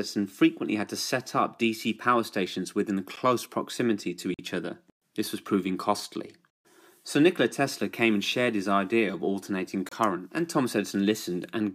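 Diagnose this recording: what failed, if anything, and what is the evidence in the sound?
The driver or buffer stage dropped three blocks of digital silence: a tick at 3.16 s (about 12 ms, fitting a 512-sample buffer), a hole from 4.34 to 4.39 s (about 46 ms, fitting 2048 samples), and 9.89 to 9.92 s (about 28 ms). Output likely went unfilled in time. The waveform shows flat silent runs with abrupt edges, and the spectrogram shows blank columns.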